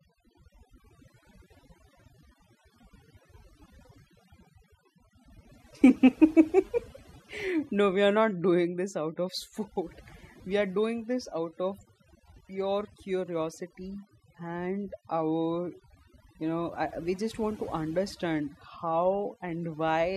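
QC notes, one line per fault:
throughout: overdone noise removal. The noise reduction was pushed far too hard on a noisy speech recording, so any frequency band sitting close to its noise estimate gets pulled right down or cut out entirely. The background drops and breaks up into twinkling specks where isolated bands flicker on and off. The quieter components of the voice fall under the same threshold and are removed with the noise.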